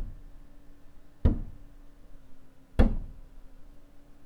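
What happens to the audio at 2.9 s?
From 2.18 to 3.62 s the sound slows by 6.5% and drops about 116 cents, then snaps back: likely a drift correction step.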